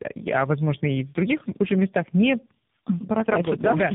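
Tandem speech coding throughout: two speech codecs in series, each re-encoding the previous one's output, leave the speech rough, warbly and muffled, empty above 3.7 kHz.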